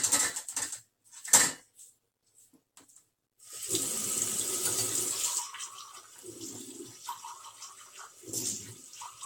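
A recording of sounds with generation loss throughout: swirly, hollow, smeared texture, blurred attacks and nothing above 17 kHz, likely from around seven successive AAC-LC passes at roughly 96 kbit/s.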